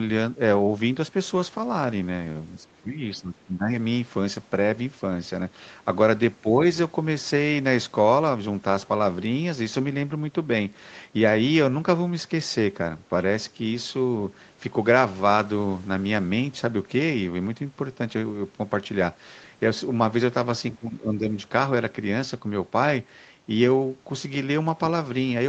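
From 2.56 to 3.0 s, 3.18 to 3.7 s, 6.42 to 6.58 s and 20.75 to 21.36 s, the speech sinks by roughly 10 to 15 dB and then comes back. That's speech suppressed in double talk, likely the echo canceller treating the talker as far-end echo and ducking everything.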